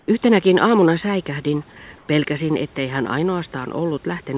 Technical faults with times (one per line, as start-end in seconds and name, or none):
0.00-0.08 comfort noise in place of the background
1.98-2.08 comfort noise in place of the background